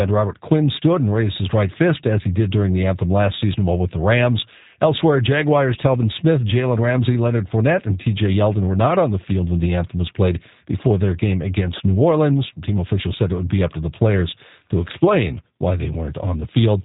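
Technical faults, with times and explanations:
Throughout, G.729 codec: the speech sounds slightly rough and synthetic and has nothing above 3.8 kHz, which fits an 8 kbit/s G.729A coder. Unlike a plain low-pass filter, the voice is rebuilt from a few pulses per frame, so the roughness is clearly audible.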